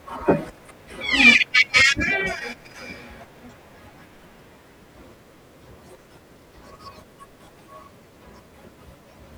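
No technical faults can be heard anywhere in this speech recording. There is no moment in the audio that calls for comment.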